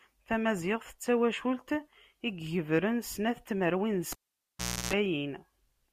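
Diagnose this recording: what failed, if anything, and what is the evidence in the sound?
Analogue wiring: cable pulled and plugged in after "snat n tmerwin d", 4.12 to 4.93 s. Pops bracket a 0.76 s dropout containing 0.32 s of 60 Hz mains buzz from the bare tip.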